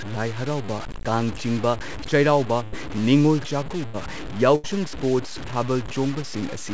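Speech runs through this recording with a gritty, grainy distortion that tracks the sound itself, roughening quiet passages and leaving the faintest moments sputtering. The likely cause is low bit depth without dither: the grain sits only around 15 dB below the signal, which points to roughly 5-bit truncation. The call path also leaves nothing above 8 kHz. Three short dropouts occur at 2.64–2.74 s, 3.86–3.95 s (just after "ꯆꯩꯔꯥꯎꯕ ꯅꯤꯡꯉꯣꯜ") and 4.55–4.66 s. In each, the last sound is stretched into a fading buzz or hiss for about 70 to 80 ms before the speech jumps ahead, with about 80 ms lost. This is a burst of packet loss, where the receiver concealed the missing packets by continuing and fading the previous audio.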